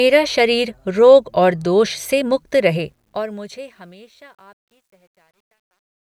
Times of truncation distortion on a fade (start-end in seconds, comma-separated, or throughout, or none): 2.47-6.18